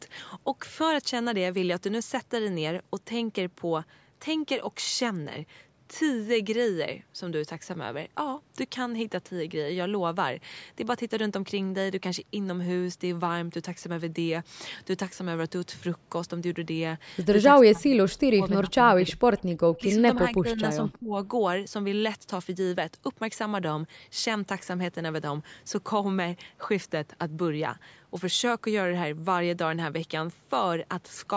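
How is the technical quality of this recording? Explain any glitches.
The speech has audible dropouts clustered between about 17.6 and 21.2 s, and one faint echo in the same stretch. The audio stops at 8 kHz, which fits the band of a call's microphone path.

Speech suppressed in double talk occurs at 17.63–18.72 s, 18.88–19.45 s, 19.77–20.03 s, 20.19–20.59 s and 20.92–21.18 s. The voice dips sharply or cuts out in pieces, by up to about 40 dB in the first two spans and about 20 to 25 dB in the later ones. The likely cause is the other party talking at the same moment: the echo canceller could not tell the local voice from loudspeaker echo and pulled both down.

An echo leak appears at 18.1–18.15 s, a brief, faint scrap of voice repeated 326 ms late and about 35 dB below the speech. It probably comes from a far end using a loudspeaker, where the echo canceller failed to remove everything its microphone picked up and sent that residue back down the line.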